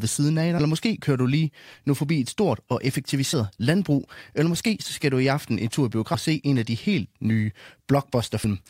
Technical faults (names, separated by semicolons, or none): damaged data in a compressed stream